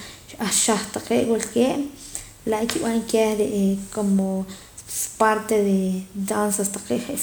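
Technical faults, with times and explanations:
No technical faults can be heard in this speech recording. There is nothing here that calls for a time or an explanation.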